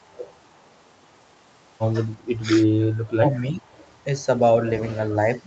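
Speech, carrying faint echo leak at 0.02–0.06 s, 0.30–0.54 s, 0.72–0.81 s and 3.77–3.95 s: scraps of voice returning about 326 ms late and very quiet, well below the direct speech. A loudspeaker echo that the far end's canceller likely failed to remove was sent back. A fixed, repeated delay and a level far under the talker distinguish it from room reverberation, which would trail off smoothly. Speech suppressed in double talk appears at 2.41–2.47 s, with a dip of about 10 dB, and at 3.16–3.64 s, where the voice sinks by about 20 dB. This is likely the canceller ducking the talker while the other side spoke at the same time. It differs from packet loss or dropouts because the voice is turned down, not replaced by synthetic fill.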